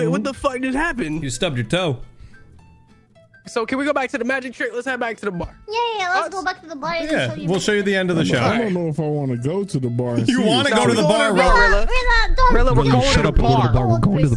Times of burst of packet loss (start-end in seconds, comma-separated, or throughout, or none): none